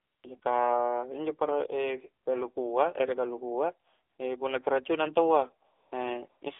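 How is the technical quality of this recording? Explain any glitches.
The recording has poor technical quality: it is phone-grade speech with clear mobile-codec damage throughout, plus several short patches where synthetic noise replaces the real background.

AMR narrowband mobile codec, throughout the whole recording: the speech has passed through the AMR-NB mobile codec, which rebuilds the voice from a compact vocal-tract model excited by a few pulses per subframe. The audible band runs only from about 300 Hz to 3.6 kHz, so the voice is thin and boxy. The buzzy, synthetic quality fits the low 7.4 kbps mode, and the coding damage is plainly audible.

AMR comfort noise at 0.00–0.24 s, 0.40–0.42 s, 2.24–2.26 s, 4.10–4.18 s, 5.70–5.92 s and 6.30–6.42 s: in each of these gaps the phone treated the talker as silent and stopped sending speech frames. The receiving end filled the hole with generated noise built from a rough level and spectrum estimate. 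The real background is swapped for a smooth, even hiss that switches in and out. The longest patches are at the start and near 5.7 s, and the 20 ms ones are brief flickers.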